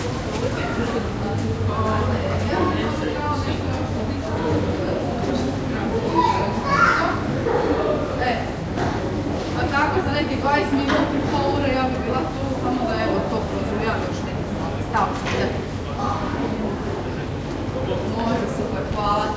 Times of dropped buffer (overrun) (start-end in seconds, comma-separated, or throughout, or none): none